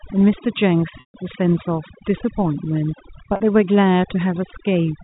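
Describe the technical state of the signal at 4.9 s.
At 4.9 s, overdone noise removal is still active, as it is throughout the clip. The noise reducer is set far too aggressively, so any frequency band sitting near its noise estimate is pushed down hard or shut off entirely, taking the softer parts of the speech along with the noise. The gaps between sounds fall to near silence speckled with twinkling artefacts, all inside the sub-4 kHz band of the G.711 telephone coding.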